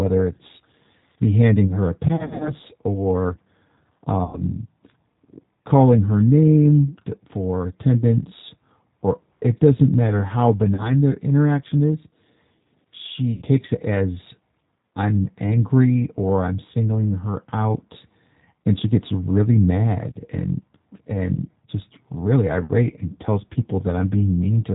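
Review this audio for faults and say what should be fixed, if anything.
G.729 codec, throughout the clip: the speech has been squeezed through a low-rate CELP coder, which fits G.729A at 8 kbit/s. Each 10 ms frame is rebuilt from a vocal tract filter, a pitch predictor and a handful of pulses, so nothing above 4 kHz survives and the voice comes out muffled, slightly rough and synthetic, with plainly audible damage. To prevent this, carry the call on a wideband codec such as Opus or G.722 end to end instead of transcoding to G.729.

VoIP packet loss concealed by the speech codec, at 2.16 to 2.52 s, 4.24 to 4.42 s, 10.75 to 10.9 s and 13.36 to 13.43 s. The decoder filled the gaps by repeating its last pitch and filter with falling gain, so the speech smears into a fading buzz or coloured noise. The worst spot is 2.16 to 2.52 s, where 150 ms went missing in runs of up to 60 ms across 240 ms. 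The others lost 90 ms, 30 ms and 60 ms. In each case the voice stays weak briefly afterwards. To prevent this, fix the network loss with QoS or a better link, and add forward error correction or redundancy.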